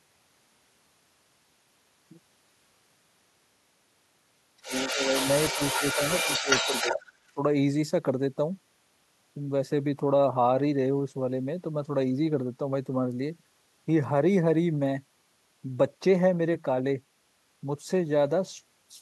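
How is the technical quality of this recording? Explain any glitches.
The recording has a clear echo-cancellation problem concentrated between roughly 4.6 and 7.4 seconds, where the far end bleeds in and the near talker is repeatedly pushed down.

Other side's voice leaking through runs from 4.62 to 7.10 s, with a second, barely audible scrap at 7.27 to 7.32 s. The far-end voice sits only a few decibels under the local talker in the main stretch. The likely cause is an echo canceller that failed to subtract the loudspeaker signal picked up by the microphone, so the residue passes straight into the outgoing audio.

Speech suppressed in double talk overlaps that leak in four bursts, at 4.67 to 5.26, 5.54 to 6.00, 6.22 to 6.49 and 6.65 to 7.01 s, plus a brief one at 7.34 to 7.39 s. The talker's level dips by roughly ten to fifteen decibels in choppy pieces, sounding gated and intermittent. 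Both ends talking at once likely left the canceller unable to separate its own talker from the echo, so it attenuated everything together.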